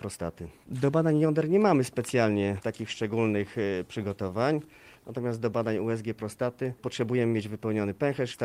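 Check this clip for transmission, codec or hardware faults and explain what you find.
No transmission, codec or hardware faults turn up in this clip.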